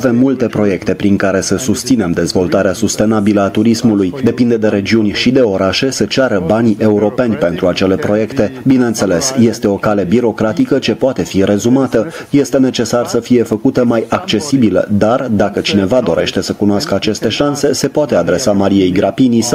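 Gain pumping runs through the whole clip: the gain keeps swinging by around 10 dB under each loud sound. That's likely the input gain set way too hot, with a fast limiter yanking it back down, so everything sounds squashed.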